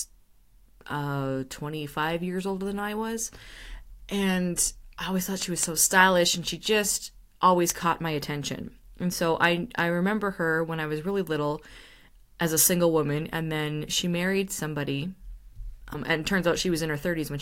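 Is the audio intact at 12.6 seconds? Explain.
Yes, the speech at 12.6 seconds is intact, with no dropout, click, distortion or other fault at that moment.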